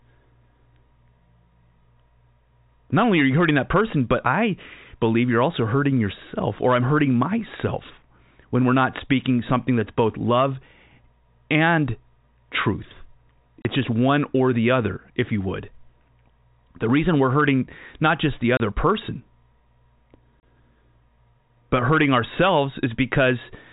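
At 13.62 s, between "and truth" and "just one or the", the speech drops out for 30 ms. The same hole recurs at 18.57 s, right after "hurting not just the", and again at 20.4 s. This is packet loss filled with silence. Each gap fits one lost 30 ms packet, replaced by pure silence at the receiver. Each hole has hard edges on both sides. The narrow G.711 telephone band stays audible throughout.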